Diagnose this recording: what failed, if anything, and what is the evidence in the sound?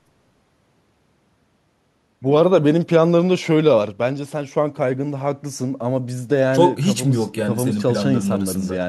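Listening closely to the speech in this recording, nothing stood out as a failure at any stage of the chain.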